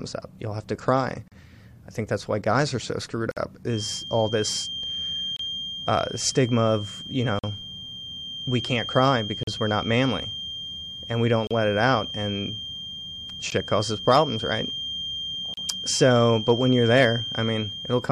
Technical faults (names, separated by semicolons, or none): gap between stream segments; feedback whistle; hard clipping